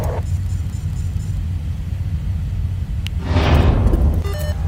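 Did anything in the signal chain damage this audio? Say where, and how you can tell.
Yes. At 3.07 s a single sharp snap sits on top of the sound, peaking around -5 dBFS. It is likely an electrical switching spike, an arc from a nearby switch or motor picked up in the analogue wiring. The waveform shows one needle-thin spike; the spectrogram shows a narrow broadband vertical line.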